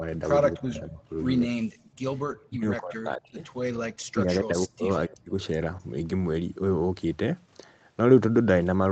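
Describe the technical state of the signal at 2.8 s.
At 2.8 s the speech sits inside a deep dip from 2.47 to 3.42 s, likely speech suppressed in double talk: the echo canceller turned the talker down, by about 40 dB at worst. The waveform shrinks to a thin trace and the spectrogram goes nearly blank.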